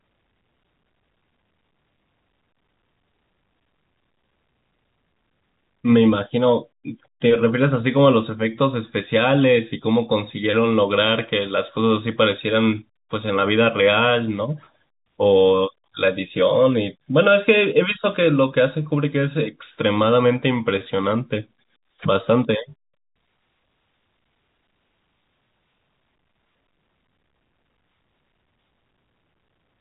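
Nothing stood out on listening to this speech recording, which comes through the telephone band with no content above about 3.8 kHz.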